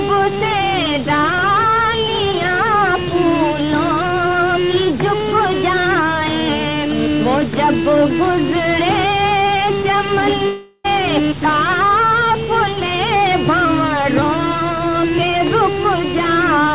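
A drift correction step runs from 4.01 to 6.49 s: the playback rate jumps 5.76% faster, raising pitch by about a semitone (97 cents) before snapping back. The likely cause is clock-matching software resampling in one step to drain its buffer.

A long network dropout follows at 10.46 to 10.86 s. The last sound is stretched into a fading buzz for about 0.38 s, then a brief silence, and the audio resumes with roughly 0.38 s missing, likely because packets never arrived.

A second drift correction step at 13.65 to 14.22 s slows playback by 5.76%, dropping pitch by about a semitone (103 cents), likely to refill the buffer. Throughout, nothing is heard above 4 kHz, which fits a G.711 mu-law call codec.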